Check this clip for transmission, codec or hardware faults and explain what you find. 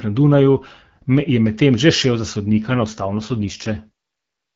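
One transmission fault is audible in this speech clip, carried over an AMR-WB (HD Voice) link with light codec damage. The AMR rate drop runs from 2.52 to 3.90 s, starting just after "medtem že šel za". The network shifts the codec to a lower rate to free bits for error protection. The sound fits a fall from 12.65 to 6.6 kbit/s. The band and continuity hold, but the speech turns rough, raspy and synthetic until the rate recovers.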